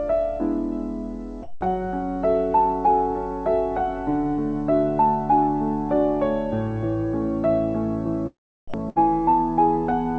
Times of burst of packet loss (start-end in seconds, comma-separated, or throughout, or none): 8.89-8.98